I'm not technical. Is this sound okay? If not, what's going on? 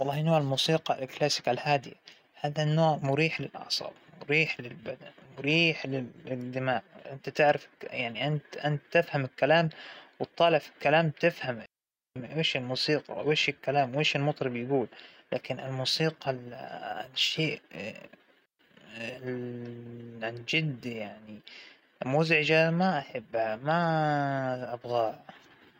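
No. The speech cuts out completely twice: once from 11.66 to 12.16 s, a gap of about half a second, and again from 18.46 to 18.59 s, a shorter gap of about 0.14 s. Each is a clean hole of near silence with no crackle or hiss around it. This is a digital wireless dropout: the wireless link lost too much data, so the receiver quickly faded the sound to silence until the signal came back.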